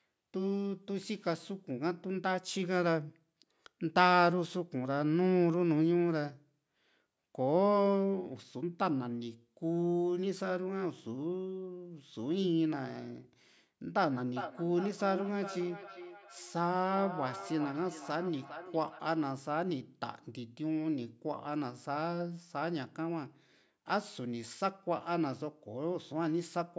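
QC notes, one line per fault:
14.26–19.03 s, feedback echo between two devices: the speech comes back as a delayed copy roughly every 0.4 s, peaking about 12 dB below the speech. A second device in the room replays this microphone's signal, which gets picked up again, beyond the reach of either echo canceller.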